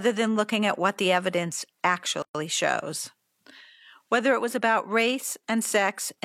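A gap at a join of encoded pieces opens at 2.22 s, right after "at what the evidence", and lasts about 123 ms until 2.35 s. Separately encoded pieces, here about 4 s each, were joined untrimmed, so encoder start delay and last-frame padding leave a silence with smeared edges before the speech resumes where it stopped.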